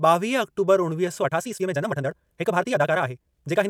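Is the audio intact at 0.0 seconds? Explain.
Yes, the audio is intact at 0.0 seconds, with no fault present at that moment.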